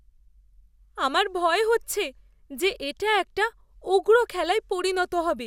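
Listening to the speech recording, nothing technical stood out at any point.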